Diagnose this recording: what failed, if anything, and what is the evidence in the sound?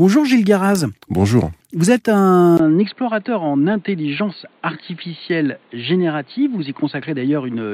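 At 2.57 s the speech drops out for about 20 ms and comes back duller and boxier, with nothing above 4.5 kHz through to the end of the clip. Its loudness stays roughly the same, but a new, faint background noise sits well below the speech. At the driver and device level, the likely cause is an input switched to a poorer device, such as a second microphone or a headset's narrowband call profile with its own tone and noise.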